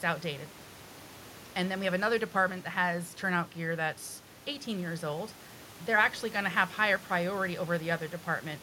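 Speech recording with no technical faults to report.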